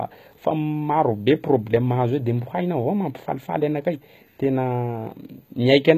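Across the whole recording the speech has likely passed through HE-AAC compression at a very low rate, with the character pointing to the v2 variant at around 20 kbps. Only the lower spectrum is coded directly. The treble is rebuilt from copied lower bands, so its harmonics don't line up with the real ones. The damage is plainly audible: sibilants come out gritty and metallic, and nothing sits above 14.9 kHz.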